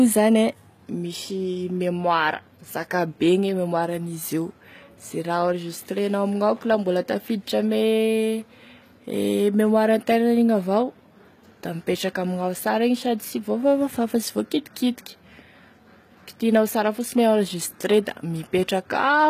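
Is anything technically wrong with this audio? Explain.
Yes. Two kinds of fault are present in this speech clip.

HE-AAC compression runs through the whole clip. Its damage is plainly audible. Nothing reaches above 14.9 kHz. The top band sounds rebuilt rather than captured. The likely cause is HE-AAC coding at a low rate, which fits about 20 kbps. This codec keeps only the lower spectrum. It fills in the treble by copying lower bands upward under a coarse envelope. Harmonics therefore fail to line up across the join. S sounds turn gritty or metallic.

Hard clipping occurs twice. The first is from 0.00 to 0.35 s, overdriven by about 1 dB. The second is from 16.55 to 16.58 s, overdriven by about 2 dB, just before "sara fosiny". In both, the signal grew larger than some stage could pass. Its peaks were cut flat. Those flat tops add harmonics far up the spectrum. They are heard as crackle on the peaks.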